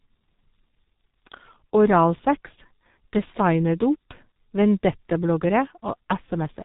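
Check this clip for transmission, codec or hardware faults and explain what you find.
The whole clip has been through the G.723.1 codec, heavily degraded. This low-rate telephony coder works in 30 ms frames at about 6.3 kbit/s, and its voice model is updated slowly. Nothing comes through above 3.8 kHz, so the speech sounds muffled and hoarse, with smeared consonants.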